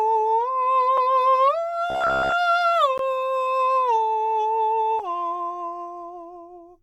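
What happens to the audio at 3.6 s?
Nothing goes wrong at 3.6 s: the music plays through that moment intact, with no dropout, click or other fault.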